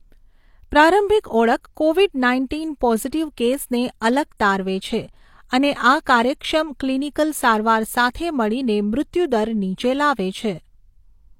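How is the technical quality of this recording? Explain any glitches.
The recording has pre-echo, a transform-codec artefact, at three attacks: 4.00 s just before "અલગ તારવે છે અને", 4.37 to 4.40 s between "કેસને અલગ" and "તારવે છે અને", and 8.13 s. The codec spread quantisation noise across each block, so short hiss lasting 12 to 27 ms leaks ahead of each onset and blurs the attack.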